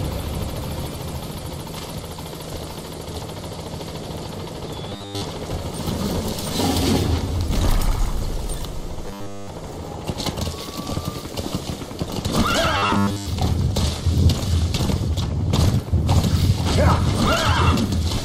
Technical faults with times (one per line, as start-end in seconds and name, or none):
4.90-5.24 robotic sound from repeated short buffers
9.08-9.50 robotic sound from repeated short buffers
12.77-13.27 robotic sound from repeated short buffers